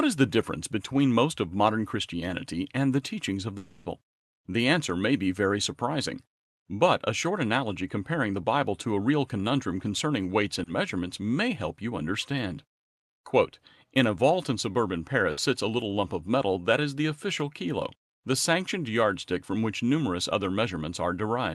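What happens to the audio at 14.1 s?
Nothing goes wrong at 14.1 s: the speech carries on intact through that moment, heard through the normal Opus call path with its top end limited to about 12 kHz.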